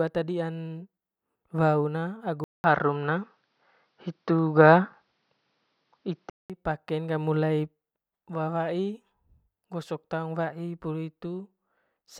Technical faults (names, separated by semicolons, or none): input switched to a poorer device